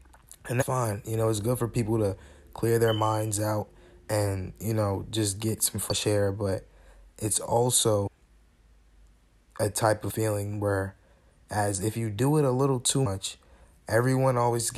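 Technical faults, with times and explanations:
0.61, 5.90–5.92, 8.06–8.08, 10.10 (between "a type of" and "where as if you") and 13.05 s (just after "it a little too"): damaged data in a compressed stream. Corrupted bytes make the decoder misread frames and lose sync, giving brief glitches of about 20 ms. Each shows as a short broadband vertical smear on a spectrogram and a jagged discontinuity in the waveform.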